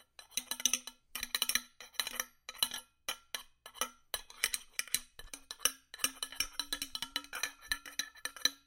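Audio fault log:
0.21–8.00 s: clock drift buffer slips. A click returns every 1.56 s, about seven times, each where a short block of around fifteen samples is dropped or repeated. The likely cause is two devices on separate clocks about 200 ppm apart, so the buffer between them periodically overflows or runs dry.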